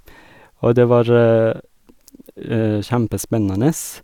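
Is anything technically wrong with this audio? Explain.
No, nothing is technically wrong with this audio.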